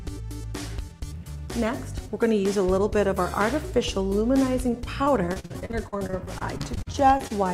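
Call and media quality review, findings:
Repeated packet loss (robotic sound), 5.03 to 7.32 s. Choppy, robotic texture with bits missing. Twenty-odd short holes back to back, longest about 42 ms, about half a second patched in total, roughly a fifth of that stretch. Network or jitter-buffer side: packets dropped or late, and the concealment keeps stretching the last bit of sound over each hole before the next one hits.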